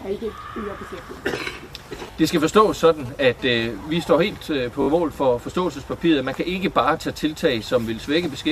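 At 2.12 s and again at 4.82 s there's a repeated buffer: fresh audio arrived late, so the same 20 ms slice replayed, twice then three times, with a hard join each pass. It comes across as a quick buzzy stutter, and nothing seems to go missing.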